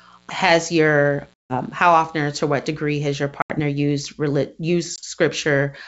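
From the start until 2.73 s, a steady, raspy mains buzz sits under the speech, roughly 35 dB below it. Sharp switching spikes, twice per 60 Hz cycle, are leaking into the line, spreading harmonics well up into the kilohertz range.

Packet loss on an ADPCM call comes at 1.34 s, 3.42 s and 4.96 s. Hard-edged silences of 160, 80 and 20 ms cut into the wideband G.722 audio. The decoder's predictor and step size then lose step with the sender's. Speech returns with some distortion, settling by 1.58, 3.60 and 5.00 s.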